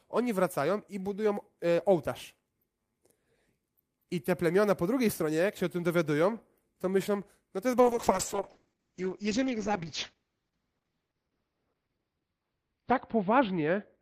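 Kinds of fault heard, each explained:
Call bitrate drop: from 7.8 s to the end, the speech turns rough, watery and muffled as the encoder is starved of bits. The coarse texture points to a fall from around 32 kbps to roughly 7 kbps, held at its lowest for about 5.2 s. The audio band shrinks from 20 kHz to 6 kHz, so a spectrogram shows all energy above 6 kHz vanishing beneath a hard, flat ceiling.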